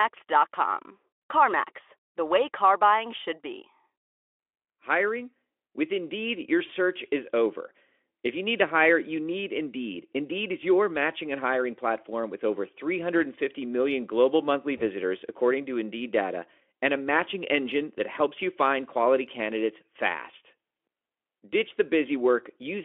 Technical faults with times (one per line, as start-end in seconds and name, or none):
1.21-1.23 VoIP packet loss concealed by the speech codec
6.67-6.71 VoIP packet loss concealed by the speech codec
14.77-14.82 VoIP packet loss concealed by the speech codec